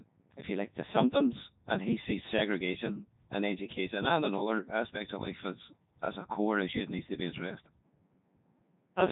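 Robotic, buzzy speech runs from start to finish with nothing above 3.8 kHz, the sound of the Codec 2 vocoder at what seems like its top 3.2 kbit/s mode: only pitch, voicing, energy and spectral shape survive, and sine-wave resynthesis heavily replaces the original waveform.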